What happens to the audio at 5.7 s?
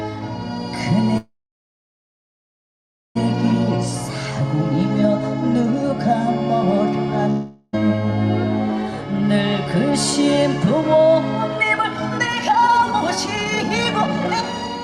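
A jitter buffer speed-up runs from 5.63 to 6.30 s. The receiver's buffer had built up excess audio, so it cut out short pitch-period slices one after another, shedding about 40 ms. Playback briefly runs about 4% fast at unchanged pitch.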